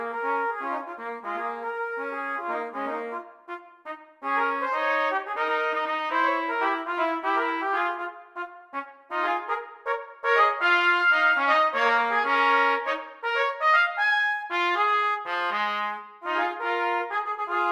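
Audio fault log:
No technical faults can be heard anywhere in the audio; the signal stays steady and continuous throughout.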